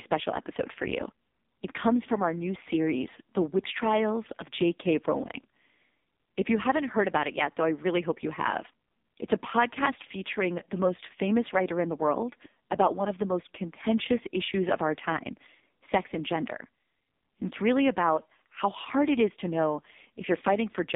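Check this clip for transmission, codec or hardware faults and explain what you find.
One fault runs through the whole clip: AMR narrowband mobile codec damage. The speech sounds thin, buzzy and synthetic, confined to a band of roughly 200 Hz to 3.7 kHz with nothing above 3.7 kHz. The codec models the vocal tract and excites it with only a few pulses in each 5 ms. At the heavy damage heard here, that excitation gets very coarse, which points to a low AMR-NB mode, around 5.15 kbps.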